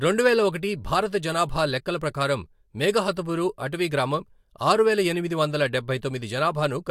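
No technical faults can be heard anywhere in the speech. There are no problems to place in time.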